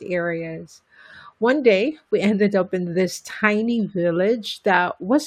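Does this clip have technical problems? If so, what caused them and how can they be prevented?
No, there are no technical problems to report in this speech recording. With nothing to trace back to a cause, there is nothing here that calls for prevention.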